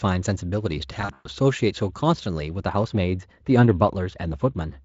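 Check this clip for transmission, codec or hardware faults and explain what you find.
Two faults are audible in this speech.

From 1.01 s to 1.28 s there is VoIP packet loss concealed by the speech codec. About 180 ms of audio went missing across 240 ms, with the longest gap 120 ms. That fits roughly nine lost 20 ms frames. The decoder filled the gaps by repeating its last pitch and filter at falling gain. The speech is smeared into a buzzy tone or coloured noise, then fades. It stays weak briefly after audio resumes.

From 2.60 s to the end there is wrongly applied de-emphasis. A treble cut was applied that the signal did not need. The response slopes smoothly downward, about 14 dB lower at 10 kHz than at 1 kHz. The speech sounds dull and muffled, as if heard through cloth.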